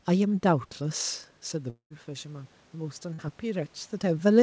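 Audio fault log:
0.78 to 4.30 s, automatic gain rising: The input level falls by about 11 dB, consistent with the talker moving back from the microphone near 1.0 s. The automatic gain control compensates by raising its gain slowly, about 5 dB over more than three seconds. Because the control acts on the whole signal, the room noise swells along with the speech, and the lift is slow enough to sound like a gradual drift rather than a step.
1.70 to 1.93 s, long network dropout: The speech gives way to a sustained, fading continuation of the last sound, then roughly a tenth of a second of near silence, before the audio resumes further along. Around 210 ms of material is gone, and about 200 ms of that gap is covered by synthetic fill. This points to a likely lengthy interruption in packet delivery, during which the receiver extrapolated the last received sound until it ran out.
3.13 to 3.21 s, burst of packet loss: A short stretch of audio, about 60 ms, never arrives in time to be played. 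The receiver bridges roughly 50 ms of it by repeating and attenuating the preceding sound, so a brief held buzz or fading hiss takes its place. Playback then jumps ahead, and the material in between is simply absent. The gap falls shortly before the talker's level shifts again around 3.5 s.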